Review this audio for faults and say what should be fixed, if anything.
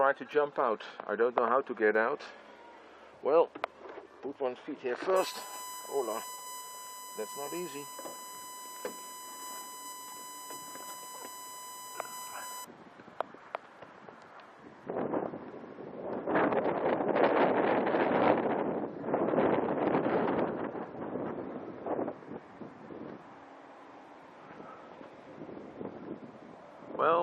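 From 5.16 to 12.65 s a USB whine sits under the audio: a fixed 1 kHz tone, roughly 10 dB below the wanted signal, which fits current drawn in 1 ms USB frames leaking into the audio path through shared power or ground. On a spectrogram it appears as a thin, unwavering horizontal line at 1 kHz that starts and stops abruptly at those times, while the waveform shows a steady raised floor filling the quieter gaps. To prevent it, power the interface separately or break the ground loop with a USB isolator or a cleaner hub.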